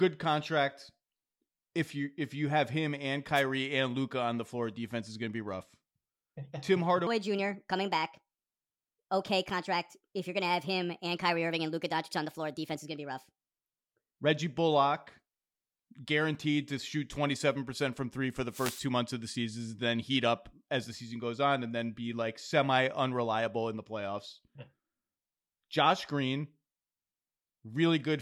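At 3.34 to 3.43 s, a wireless microphone noise hit cuts in as a brief swish of static. The radio signal faded and receiver noise rose over the speech. From 7.07 to 14.14 s, a section at the wrong speed plays 1.35 times too fast. Pitch jumps about five semitones, and the speech turns high and hurried. The likely cause is playback against the wrong clock. At 18.49 to 18.86 s, a longer noise hit brings a burst of static.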